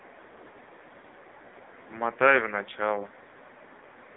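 Speech heard through the AMR narrowband mobile codec throughout: nothing above about 3.8 kHz, a 150 Hz to 3.7 kHz line band, and a buzzy, synthetic voice from heavy codec damage, which fits a low mode near 5.9 kbps. That buzz sets it apart from simple telephone band-limiting.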